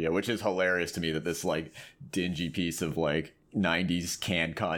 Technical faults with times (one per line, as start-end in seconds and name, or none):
none